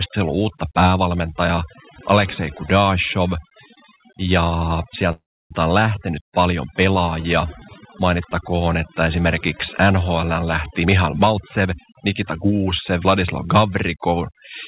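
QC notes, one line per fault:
Throughout, overdone noise removal: the background drops away and breaks up into twinkling specks. A noise reducer set far too hard is pulling individual frequency bands down or out whenever they sit close to its noise estimate, taking quieter parts of the voice along with the noise.
5.12 to 5.52 s, call audio freeze: the sound stalls for about 0.4 s, the last moment trailing off as a fading buzz into roughly 0.3 s of silence, then picking up again at "on lähtenyt paljon pelaajia" with nothing lost. Likely a jitter buffer running dry while packets were held up, which adds a gap of about 384 ms rather than dropping audio.
10.82 to 13.39 s, jitter buffer speed-up: the speech runs about 14% fast and sounds hurried, yet the pitch stays put. The buffer is trimming its backlog by cutting out many short pitch-period slices in succession, roughly 0.4 s removed in all.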